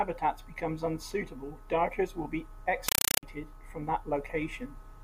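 Just after "unsuitable darters will be", from 2.88 to 3.23 s, the speech gives way to a compressed stream played as audio. An encoded Dolby Digital (AC-3) stream, consistent with a 256 kbps encode, was passed on as ordinary samples without decoding. Each frame becomes a 5.33 ms burst of harsh noise followed by silent padding, 31.25 times a second, heard as loud chattering static. The waveform shows loud blocks separated by near-silent stretches, and the spectrogram shows evenly spaced broadband vertical stripes.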